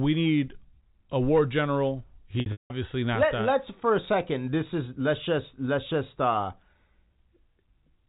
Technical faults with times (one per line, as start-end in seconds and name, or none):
2.40-2.70 packet loss with pitch repetition